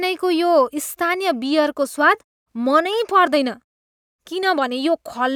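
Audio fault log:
No fault found in this audio.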